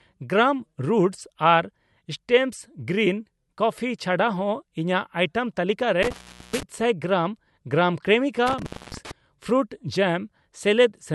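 At 6.03 to 6.63 s and 8.47 to 9.11 s, intermittent contact breaks the speech. A loose connection opens, dropping the signal for 0.41 s and 0.26 s with crackle at the edges. Waveform: near-flat gaps edged by spikes. Spectrogram: dark bands bordered by thin vertical streaks.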